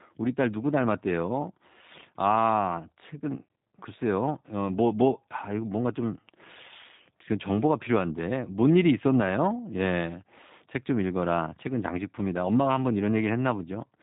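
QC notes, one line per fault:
Throughout: G.729 codec damage, plainly audible across the speech. The voice has a slightly rough, synthetic edge, as if rebuilt from a vocal tract filter and pitch predictor fed by a sparse handful of pulses rather than passed through intact, which fits an 8 kbit/s G.729A coder. A spectrogram shows a hard ceiling at 4 kHz with nothing above, and buzzy, smeared harmonics below.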